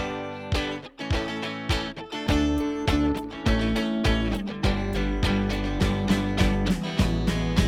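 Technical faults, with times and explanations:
No technical faults can be heard.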